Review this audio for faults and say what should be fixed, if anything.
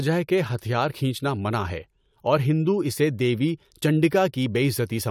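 Nothing should be fixed, since no faults can be heard in the audio.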